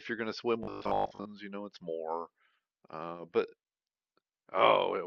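The clip is speech. From 0.63 to 1.27 s it takes on a robotic sound from repeated short buffers: a rigid, metallic 50 Hz buzz that still roughly tracks the words. The likely cause is a 20 ms stretch being replayed in place of missing audio most of the time.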